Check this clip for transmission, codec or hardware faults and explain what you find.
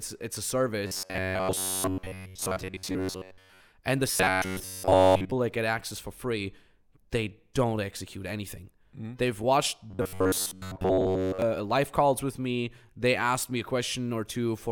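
The speech carries three episodes of robotic sound from repeated short buffers: 0.87 to 3.61 s after "it's a", 4.11 to 5.32 s before "that get access for", and 9.91 to 11.42 s before "life calls with me". A rigid, metallic 93.8 Hz buzz that follows the voice only roughly is heard, most likely from audio arriving too seldom, with roughly 10.7 ms snippets replayed for most of each stretch.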